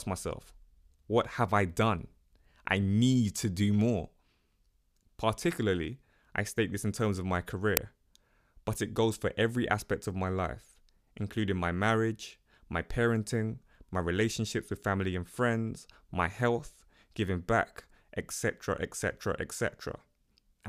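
At 7.77 s an uninitialised buffer plays: a loud, short crack, about 2.7 ms long. That fits a 128-sample buffer sent out before any audio was written to it.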